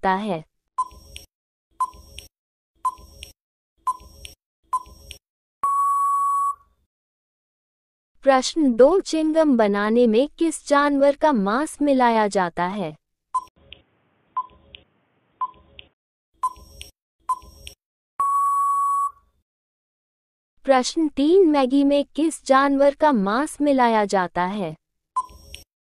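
At 13.48 s the sound drops out for about 80 ms, then returns dull and boxy, with nothing above 3.6 kHz, a faint new noise floor and no real change in level, until 16.01 s. This is likely an input switched to a poorer device.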